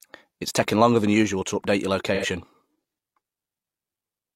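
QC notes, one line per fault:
2.14–2.26 s, AAC frame loss with concealment: just after "usual to update your", roughly 85 ms of audio goes missing, which fits two lost frames. The decoder repeats the last good spectrum with scrambled phase, so the gap becomes a smeared, noisy, phasey patch rather than the silent hole of a plain dropout.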